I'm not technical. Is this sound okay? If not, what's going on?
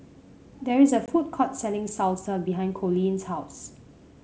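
No. At about 1.06 to 1.08 seconds, one small piece of the call, roughly a single packet of about 20 milliseconds, failed to arrive. That is packet loss on an ADPCM call. The receiving end filled the gap with silence, and because this kind of coding predicts each moment from the last, it briefly lost track. You hear a sharp little dropout in the speech, then a moment of slight roughness before it settles.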